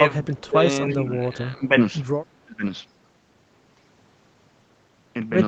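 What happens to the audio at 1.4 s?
At 1.4 s the speech sinks in level and comes through thinned and patchy, dropping by about 10 dB at its deepest, within a dip that runs from 0.93 s to 1.71 s and affects most of that stretch. This is likely speech suppressed in double talk: with both sides talking at once, the echo canceller couldn't tell the near talker apart from the loudspeaker echo, so it pulled down everything, including the wanted speech.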